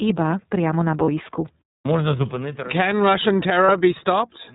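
The whole clip runs through the iLBC codec, and you can plainly hear it. It's a narrowband VoIP codec, so nothing above 4 kHz survives, and the speech comes across dull and slightly rough and synthetic. The frame timing heard in the dropouts points to the 30 ms frame mode, which fits iLBC's 13.33 kbps setting. Each frame's excitation is coded on its own, so the graininess sits evenly over everything rather than building up.

Then there are two short lost iLBC frames, from 1.05 to 1.09 s and from 3.66 to 3.70 s, each about 30 ms, so a single frame apiece. In both gaps the decoder fills in by repeating the last pitch cycle with a bit of noise mixed in, giving a brief held, faintly buzzy vowel-like smear. Since iLBC frames don't depend on their predecessors, the speech snaps straight back right after each one.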